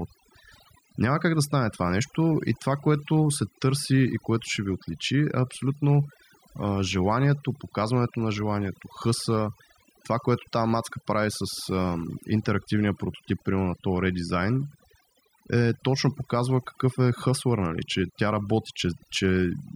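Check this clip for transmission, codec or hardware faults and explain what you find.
One fault runs through the whole speech clip: overdone noise removal. A noise reduction stage set far too aggressively keeps muting individual frequency bands it judges to be noise, taking quiet speech detail with them. The background drops and breaks up into twinkling specks.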